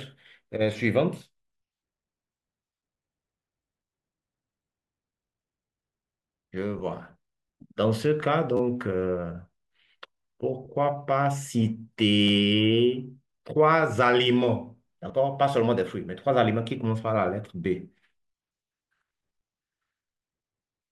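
At 6.79 s, lost LE Audio frames leave a 10 ms gap. The LC3 decoder fills it by reusing the last spectrum with randomised signs, producing a brief noisy smear. The same happens at 10.65 s, and at 15.08 to 15.10 s, where about 20 ms is concealed, which fits two consecutive lost frames.

At 8.57 to 8.60 s, a repeated buffer occurs. Audio arrived late, so a 10 ms piece plays three extra times with hard joins, giving a short buzzing stutter. No audio appears to be lost. The same fault recurs at 12.28 to 12.30 s with two extra repeats of a 10 ms buffer.

Light lossy compression is also present, audible at most as a faint watery texture on noise and attacks.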